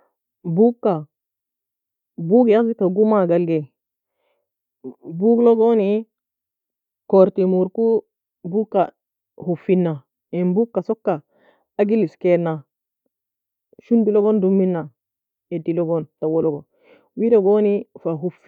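Listening to the speech in this recording, nothing technical stood out as a problem.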